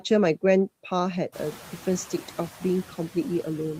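Right from the start of this speech clip there are noise suppressor artifacts running the whole way through. The suppressor keeps pulling down whatever bands it reads as steady noise, but only by about 5 dB, so the noise dips in the gaps between words and swells back up under them. The room noise jumps by about 17 dB, somewhere around a second and a half in, leaving it only about 19 dB below the speech.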